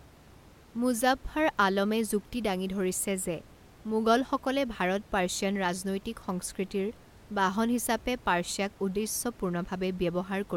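Listening through this speech recording, nothing stood out as a technical problem, with only a low room noise sitting about 25 dB below the speech.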